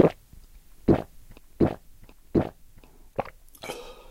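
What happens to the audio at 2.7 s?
Nothing goes wrong at 2.7 s; the sound carries on intact through that moment, with no dropout, click or distortion.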